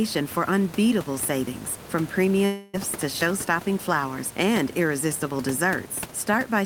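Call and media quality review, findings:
Long network dropout, 2.45 to 2.75 s, right after "for unbeatable savings from". About 0.3 s of audio gone, not recovered. Receiver extends the last sound as a fading buzz across nearly the whole gap, with no fully silent stretch, then playback resumes further on with the lost section skipped. Likely cause: upstream packet loss with receiver-side concealment. Room noise sits about 15 dB below the speech.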